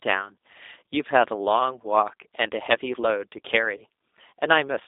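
From start to finish the speech carries G.729 codec damage: the line is limited to roughly 300 Hz to 3.7 kHz, and the voice sounds plainly rough and synthetic. That fits an 8 kbit/s coder rebuilding each frame from a vocal tract filter, pitch predictor and sparse pulses.

Between 3.77 and 3.84 s comes VoIP packet loss concealed by the speech codec. About 30 ms of audio went missing, which points to a single lost packet. The decoder stretched its last pitch and filter into a brief buzzy tone or coloured noise that fades, and the voice stays weakened until about 3.84 s.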